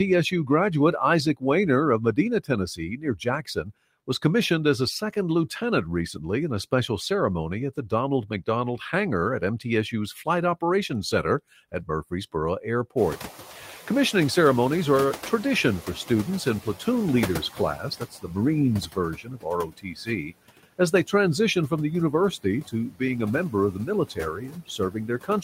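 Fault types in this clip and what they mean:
noise suppressor artifacts: The suppressor lowers every band it judges to be steady noise, frame by frame, cutting the background by about 13 dB across the clip. The leftover noise dips between phrases and swells under the speech.
speech cut by the noise suppressor: The suppressor mistakes parts of the speech for noise and turns them down with the background, by about 13 to 17 dB. Quiet stretches sound swallowed, notably just before "was commissioned as a" and "as they transition from", and through the ending.
noise suppressor catching up: The room noise jumps by about 25 dB near 13 s, and the suppressor's noise estimate lags behind. The louder noise first passes with less reduction, then sinks gradually over about 4.9 s until it is held down by about 11 dB.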